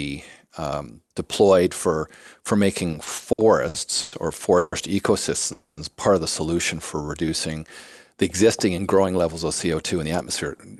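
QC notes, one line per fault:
2.91–4.14 s, repeated stalls (stutter): right after "um deployed for for" the flow of speech catches six times, the longest hold about 100 ms, with roughly 290 ms of filler in total, about a quarter of that span. Packets were reaching the receiver late or more slowly than playback, so the jitter buffer kept draining. Each time, the last sound was carried on until audio resumed, so nothing is lost but the phrase drags and stutters.
4.58–4.74 s and 5.52–5.79 s, call audio freeze: two stops, the first filled for about 140 ms and the second for about 250 ms, the latter ending just before "part of the solution". Neither drops into silence. The likely cause is packets held up in transit, emptying the jitter buffer, with the receiver extending the last sound as a buzz or hiss. Playback then resumes where it paused, so each freeze inserts a gap and pushes everything after it later by the same amount.
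7.02–7.60 s, jitter buffer slow-down: following "of the solution for", speech runs at about 89% speed with pitch unchanged, adding about 78 ms. The buffer was running low or had just raised its target delay, so the receiver repeated single pitch periods or bits of pauses many times over to build a reserve, drawing sounds out.
9.74–10.49 s, jitter buffer speed-up: speech runs at about 107% speed at the same pitch, roughly 70 ms shorter, and sounds hurried. The buffer held more audio than its target, so the receiver cut short pieces of one or a few pitch periods repeatedly to bring the delay back down.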